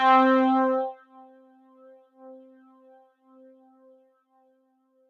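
Throughout, a speech-tuned noise suppressor applied to these sounds treats sustained tones and tails as noise, pumping them down by about 20 dB; the waveform shows attacks surviving while decays collapse into gaps.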